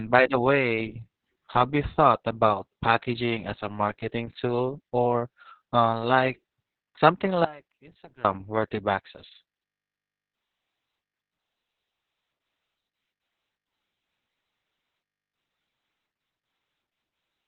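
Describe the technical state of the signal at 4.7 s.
At 4.7 s, as throughout the clip, the speech passes through Opus voice compression in its narrowband SILK mode, consistent with a bitrate near 6 kbps. The excitation is coded coarsely and nothing survives above 4.3 kHz, leaving the voice muffled, hoarse and somewhat robotic.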